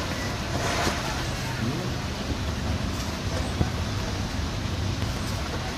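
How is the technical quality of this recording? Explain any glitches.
The recording is marred by three loud pops. A loud pop sits at 0.87 to 0.90 s, another at 3.61 to 3.64 s, and a double pop spans 5.02 to 5.19 s. Each is a sharp thump peaking roughly 15 dB above the surrounding sound, which carries on beneath it. The likely cause is a sudden voltage step or pulse, such as from a plug, switch, static discharge or driver glitch, shaped by the following circuitry into a brief percussive burst.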